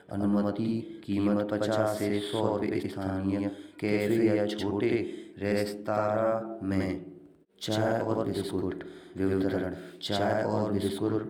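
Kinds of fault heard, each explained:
Channel delay (doubling): one channel arrives about 93 ms behind the other, and the two are summed to mono, so the speech is heard twice at equal level, as a slap echo throughout, a lag that fits a 4096-sample buffer.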